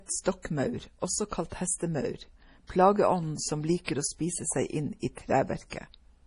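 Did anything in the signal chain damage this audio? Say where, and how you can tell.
Yes. The codec stage was likely a heavily starved MP3 encode, consistent with a bitrate around 32 kbps. Nothing survives above 10.6 kHz, and throughout the speech, weak frequency lines drop in and out between frames, giving a watery, swirling texture and metallic sibilants.

The same codec causes pre-echo at 3.84 s, just after "hestemaur plageånden som", and at 5.70 s. Quantisation noise sized for a sharp attack spreads back across its transform block, so a short hiss lasting 31 ms and 26 ms respectively precedes each onset and softens it.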